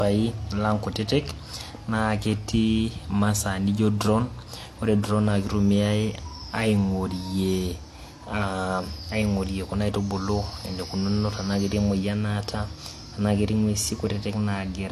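Throughout, the speech shows transcoding between lossy codecs, likely an AAC-LC pass followed by re-encoding in HE-AAC, at rates that point to roughly 48 and 40 kbit/s. Nothing survives above 13.5 kHz, and the artefacts of both codecs are heard together.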